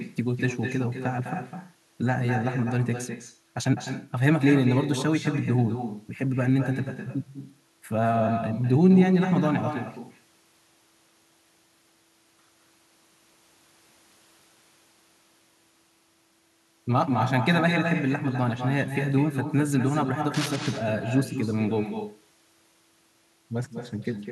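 Throughout the speech, an echo with no canceller trails every phrase. The far end's loudspeaker feeds its microphone, and the copy returns around a fifth of a second late, about 8 dB down and thinner. On a spectrogram, each syllable's harmonics repeat as a fainter ghost behind it.

From 20.34 to 20.57 s, cable scratch noise rasps over the speech. It is a dense, uneven crackle roughly 10 dB below the speech, likely from a worn cable or connector being moved. The waveform shows ragged, spiky bursts, and the spectrogram shows a brief broadband smear of irregular vertical streaks.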